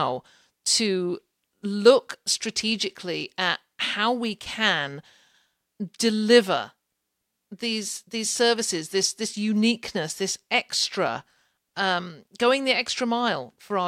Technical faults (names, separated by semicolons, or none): none